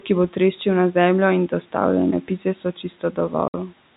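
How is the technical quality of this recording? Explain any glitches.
The recording has two glitches close together near the end: the noise suppressor swallows some speech, and then a short dropout of silence follows. It is telephone-band audio, consistent with G.711 mu-law at 64 kbps, with nothing above 4 kHz and room noise sitting about 25 dB below the speech.

Between 2.64 and 3.33 s, speech is cut by the noise suppressor. The suppressor mistook quiet parts of the speech for background and turned them down together with the noise, by about 11 dB at the deepest point. In total, a bit over a tenth of a second is affected. Soft consonants and word endings come out faint or swallowed. On a spectrogram these show as patches where the energy fades abruptly toward the noise floor. The waveform envelope dips in short notches that don't follow the natural decay of the speech.

From 3.48 to 3.54 s, there is packet loss filled with silence. 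About 60 ms of audio went missing in transit, which fits two lost 30 ms packets. The receiver substituted digital silence. The speech stops dead and restarts with hard edges. The waveform shows a flat line with abrupt, square cuts at both ends. The spectrogram shows a clean vertical gap across all frequencies.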